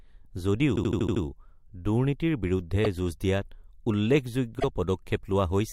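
Repeated frames stutter through this speech at 0.75–1.22 s, where a 78 ms block, which fits three compressed frames, plays six extra times and adds 470 ms. Shorter 26 ms repeats at 2.84–2.86 s and 4.59–4.64 s each replay a single frame once.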